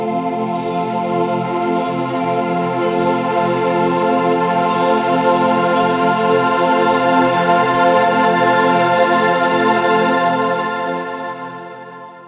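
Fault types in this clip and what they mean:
Aliasing: the audio was downsampled without an adequate anti-aliasing filter, which fits a drop from 44.1 kHz to 8 kHz. Content above the 4 kHz fold point reflects back as unrelated tones, roughly 20 dB below the signal, giving gritty, metallic high frequencies throughout.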